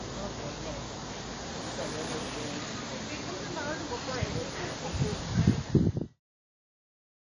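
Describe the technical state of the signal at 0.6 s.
At 0.6 s the sound carries codec damage that runs through the whole clip. It is plainly audible. Nothing is heard above 10 kHz. What remains has a ringing, washy quality, with a hiss that swells and falls with the signal. The likely cause is WMA compression at a low bitrate, which fits about 32 kbps. Long transform blocks smear quantisation noise over tens of milliseconds. Weak high components are simply dropped.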